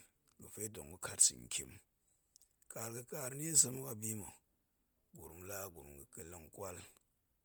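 Throughout the clip the speech carries heavy transform-codec damage, most likely from Bluetooth LC3 compression. Sibilants and upper harmonics sound breathy and grainy, because the encoder threw away much of the top spectrum and filled the gaps with noise. The damage fits a bitrate near 32 kbps with 10 ms frames. A simple low-pass filter would leave the top dull and empty. Here the band still reaches about 20.1 kHz, but it holds rough, noisy texture rather than real detail.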